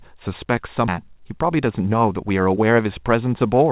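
A speech recording in which a stretch of audio was dropped at 0.88 s, a skip ahead: roughly 0.7 s of speech is missing, and the two sides are butted together with no gap or fill. From 1.02 to 2.86 s, a jitter buffer speed-up trimmed short pitch-period slices to drain its backlog, cutting about 0.2 s. The speech runs 110% fast at unchanged pitch and sounds hurried. The band stops at 4 kHz, which fits a G.711 A-law call codec.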